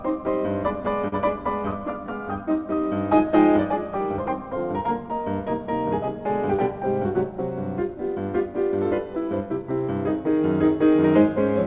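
At 1.08 s there is a short stall from a late packet, lasting to about 1.14 s. A packet arrived late and the jitter buffer ran dry. The receiver held the last sound in place for 40 ms while it waited. Nothing was lost. The audio then picked up from the same point, now running 40 ms later. You hear one sound drawn out slightly too long, with a faint buzzy or dipping quality.

From 1.5 s to about 2.2 s come scattered short gaps. Roughly four packets went missing or arrived late across this stretch. Each hole was patched by carrying the previous sound forward. Together the patches add up to roughly 40 ms, the longest around 10 ms, and cover about 7% of the stretch. No audio is lost. The result is a string of tiny ticks and smeared hiccups, heard through a band that stops at 4 kHz, which fits a G.711 mu-law call path.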